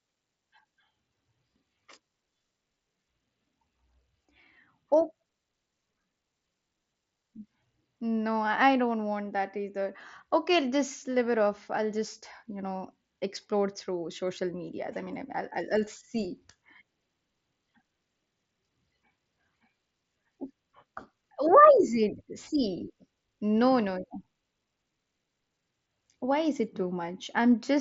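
No technical faults can be heard anywhere in the speech. It passes through a Bluetooth mSBC headset codec, so nothing reaches above about 7.7 kHz and louder moments carry the light grain that codec adds.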